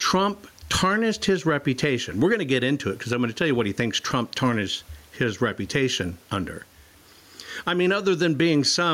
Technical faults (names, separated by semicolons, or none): gain pumping